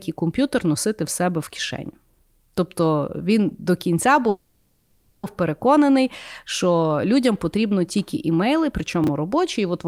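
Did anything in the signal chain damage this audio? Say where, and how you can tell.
Yes. From 4.29 to 5.25 s the sound stalls and the last sound stretches into a fading buzz or hiss for about 0.94 s without dropping to silence, then resumes exactly where it stopped. This is a call audio freeze at the network stage, likely delayed packets draining the jitter buffer, leaving everything about 940 ms later.

Between 9.04 and 9.08 s there is a brief jumbled blip. A 10 ms chunk plays three chunks late, after audio that should follow it, so this is chunks out of order at the driver or buffer stage, with three hard joins.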